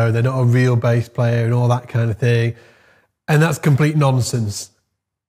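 No technical faults can be heard anywhere in this audio. Nothing stands out at any point that would need to be placed on a timeline.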